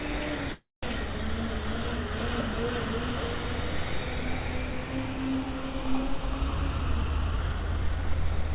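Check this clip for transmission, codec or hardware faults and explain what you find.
Two faults are audible in this everyday sound recording, which is band-limited to 4 kHz, consistent with a G.711 mu-law call path.

From 0.52 to 0.85 s there is a call audio freeze. The last sound continues as a fading buzz or hiss and then about 190 ms of silence. The likely cause is late packets draining the jitter buffer. The sound resumes where it stopped, roughly 0.3 s late.

From 6.57 to 8.49 s there is a jitter buffer speed-up. The receiver trimmed short pitch-period pieces, about 0.3 s in total, so the sound plays at 115% speed and seems hurried without any change in pitch.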